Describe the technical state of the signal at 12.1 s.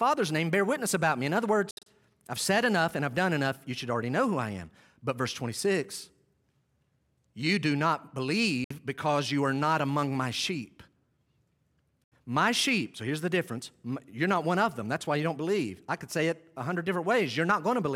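At 12.04 to 12.16 s the speech drops to abrupt silence for about 0.12 s, likely a Bluetooth dropout of late packets. It resumes further along rather than picking up where it stopped.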